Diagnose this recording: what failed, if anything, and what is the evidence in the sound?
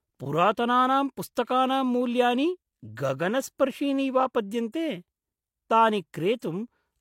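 Transcoding between lossy codecs, throughout the speech, at the codec stage. Nothing sounds above 16.3 kHz, and two different sets of compression artefacts are heard together. This points to a low-rate HE-AAC encode likely re-encoded as roughly 96 kbit/s MP3, which spent bits on the earlier damage and added its own.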